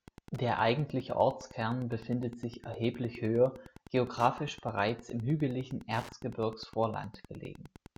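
From start to finish the speech carries Wi-Fi interference. A nearby radio's beacon, rectified by the audio circuit every 102.4 ms, ticks steadily about ten times a second, roughly 20 dB below the speech. A spectrogram shows evenly spaced thin vertical broadband lines; the waveform shows regular narrow spikes.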